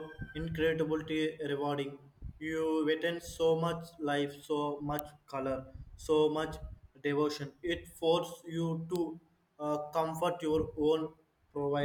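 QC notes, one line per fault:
4.99 s and 8.96 s: electrical switching spike. Two sharp, isolated snaps sit on top of the speech, the first loud at around -10 dBFS peak and the second quieter at around -20 dBFS. Each is likely a nearby switch or static discharge arcing briefly into the audio line.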